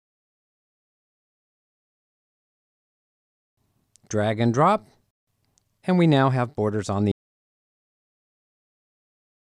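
Audio dropout to silence from 7.12 s through to the end of the clip: the sound cuts off abruptly and what follows is silence, with no room tone at all. This likely comes from the input being lost while the recorder kept writing silence.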